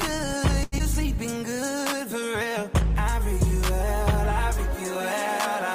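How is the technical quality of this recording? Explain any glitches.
Two network glitches sit right at the start, less than a second in.

From 0.63 to 0.74 s there's a short stall from a late packet. A packet didn't show up on time, the jitter buffer ran dry, and the receiver held the last bit of sound for about 88 ms until the data arrived. Then it picked up exactly where it left off, so nothing is lost. You hear the sound hang on too long, with a faint buzzy or slightly sagging quality, and everything after is pushed about 88 ms later.

Right after, around 0.78 to 0.81 s, there's a short concealed packet loss. This time about 40 ms of audio never made it to the decoder. The receiver patched only around 12 ms by extending what came before and then blended back into the real signal, so the playback also catches up by roughly 30 ms. It comes across as a quick smear or wobble, with a sliver of sound simply gone.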